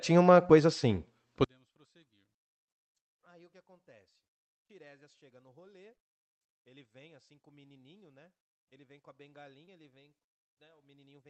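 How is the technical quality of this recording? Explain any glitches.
Technical quality is poor. The speech collapses early and stays nearly silent, and brief dropouts break through the Opus-coded call audio, whose bandwidth stops at 8 kHz.

From 1.44 s to the end, the level falls by about 38 dB, leaving a faint residue. The likely cause is one channel inverted, cancelling the centred speech on mono summing. A plain gain drop would keep the tone intact.

At 0.47 s, 5.97 s, 8.69 s and 9.65 s, short concealed packet loss produces brief smears where the decoder extended the preceding sound for 15 to 23 ms, unlike clicks from digital clipping.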